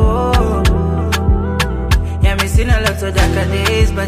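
No technical fault can be heard anywhere in the audio; the signal stays continuous throughout.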